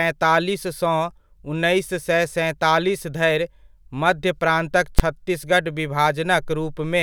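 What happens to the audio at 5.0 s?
Right around 4.99 s there's a single loud bang from invalid numbers at full scale. Somewhere in the processing, a calculation produced infinite or invalid values, and those got clamped to the maximum positive or negative level, so the output sits pinned at one extreme value, far beyond the speech peaks, for about 10.7 ms. That's roughly what you'd expect from a 512-sample processing block. It's so brief that you don't hear separate pops or a silent gap, just one sharp bang cutting through the speech.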